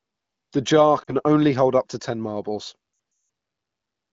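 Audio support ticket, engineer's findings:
Brief dip and warble at 1.04–1.15 s; longer stretch at 2.93–3.29 s where sound drops to near silence (worst run about 180 ms), returning rough. Lost AMR speech frames: AMR-WB decoder concealment repeating last good parameters with decaying gain. Clean wideband, which fits a mid-to-high AMR-WB mode.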